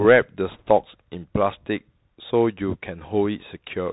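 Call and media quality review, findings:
Bluetooth CVSD headset codec, throughout: narrowband, muffled speech with scratchy s sounds, granular hiss under the voice, and distortion on loud bright syllables where the adaptive step cannot keep up. Spectrogram shows nothing above 4 kHz; consistent with a 64 kbit/s one-bit delta link.

Bit errors on a Bluetooth voice link, 0.52 to 0.69 s: brief rushing, crackly noise over the speech, no sharp clicks. Error rate looks like a couple of percent. Spectrogram shows diffuse broadband speckle below 4 kHz; waveform shows added fuzz without spikes, since no bit outweighs the others and each error dies away fast.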